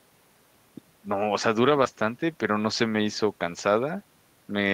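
At 1.83 s to 1.87 s the speech briefly smears, a short blur or wobble where the sound seems to hang on itself for an instant before blending back. This is short concealed packet loss: about 20 ms of the call arrived too late for the decoder. The receiver covered the gap by extending the preceding sound for 20 ms, then crossfaded back into the genuine audio, which produces that momentary smeared texture.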